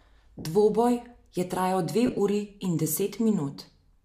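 Lost LE Audio frames at 0.39 to 0.45 s: about 60 ms of speech becomes a noisy smear. At 2.07 to 2.20 s, 80 ms of short, scattered dropouts break up the speech into smeared fragments.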